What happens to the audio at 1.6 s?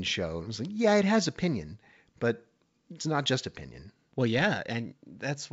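Nothing goes wrong at 1.6 s: the speech is intact there, carried cleanly through the G.722 wideband telephone coding at 64 kbit/s with at most faint coding damage.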